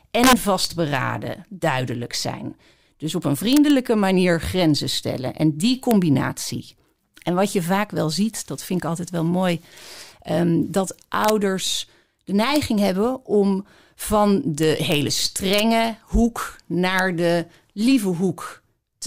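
Integer overflow cracks the speech at 0.24–0.65 s, 3.53–3.70 s, 5.91 s, 11.25–11.30 s, 12.56 s, 14.63–14.94 s, 15.53–15.60 s and 16.99 s. Peaks reaching up to about 2 dB past the integer limit wrap to the opposite sign instead of being held at the limit. Each one becomes a violent full-range snap, far sharper than the flattened buzz of clipping.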